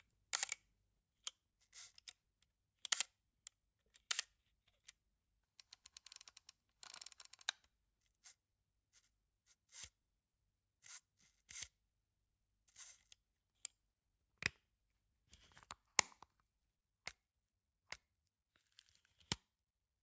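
No technical faults are audible anywhere in the audio.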